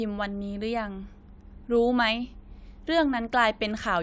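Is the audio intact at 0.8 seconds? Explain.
Yes, at 0.8 seconds the audio is intact, with no dropout, click, distortion or other fault to be heard at that moment.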